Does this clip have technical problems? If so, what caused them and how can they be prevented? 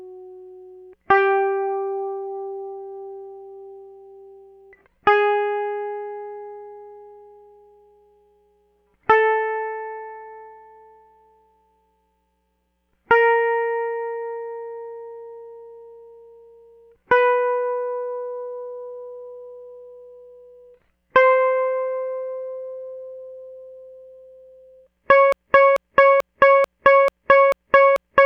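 Yes. From 25.32 s to the end, a 0.44 s slice of the music repeats seven times back to back, a broken-record loop likely caused by a stalled player or stream resending its last fragment. Unlike echo, every pass is identical, with no decay. Flushing the buffer on stall prevents it.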